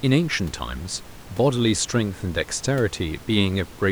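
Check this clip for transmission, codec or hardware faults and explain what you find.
No transmission, codec or hardware faults.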